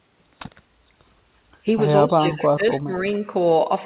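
It's a short speech clip over a narrowband call line, with nothing above 4 kHz. From 2.07 to 3.07 s the talker keeps dipping, about 25 dB at the deepest, for most of that second. That's likely speech suppressed in double talk, with the echo canceller ducking everything while both ends overlap. Inside that stretch, at 2.43 to 2.47 s, there's a faint scrap of echo leak, well below the speech and trailing by about 246 ms.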